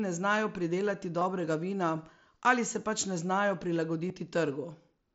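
Packets were dropped on the Bluetooth link and covered by concealment: concealed Bluetooth headset packet loss at 1.20 s and 4.08 s. Each gap lasts about 15 ms, consistent with two lost packets, and is filled with repeated recent waveform, leaving a brief buzz.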